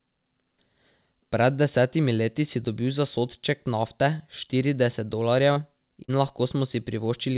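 Short concealed packet loss occurs at 5.52–5.58 s, right after "za sodček nafte štirideset", and again at 6.04–6.10 s. Each time about 40 ms of audio missed the decoder, which bridged the gap by extending the preceding sound. The result is a brief smear or wobble.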